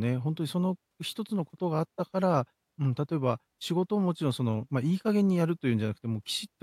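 Nothing goes wrong anywhere in this speech recording; there's simply no technical fault to point out.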